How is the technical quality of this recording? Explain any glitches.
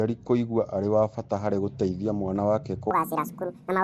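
The technical quality is fairly rough, with codec damage throughout and a speed fault at the end.

The whole clip has a gritty, hissy halo and a smeared, underwater character. That's likely Nellymoser compression, which fits a low rate around 32 kbps. Too few bits per block starve the weaker bands, and they get filled with noise.

From 2.91 s to the end, just after "harĩ gũteithia mwana wake", a section at the wrong speed runs 1.77 times too fast. Speed and pitch rise together by roughly ten semitones, so the speech turns high and hurried. That's likely a playback or edit step using the wrong clock.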